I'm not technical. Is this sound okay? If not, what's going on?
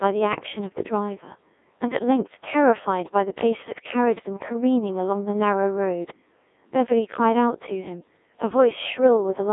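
No. The whole recording has passed through a Codec 2 vocoder, a very low-rate speech system used on digital radio. It does not keep the actual sound wave. It sends only a rough outline of pitch, loudness and tone, and the receiver rebuilds the voice from simple tones. That is why the speech sounds robotic and buzzy all the way through. A poor phone line sounds muffled and thin but still natural, and this sounds synthetic instead.

There are also bit errors on digital voice radio, from about 0.33 to 0.46 s. For that brief moment, a small share of the transmitted data arrived scrambled. Because every piece of data controls the pitch or tone of a whole short slice of voice, the sound jumps into a short warble or bleep before recovering. Static or a dropout would be noise or silence, but this is brief synthetic gibberish.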